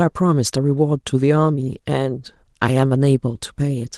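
Nothing here goes wrong at any point in this speech clip, which just carries its light Opus voice compression at around 20 kbps in the hybrid mode with the full band kept.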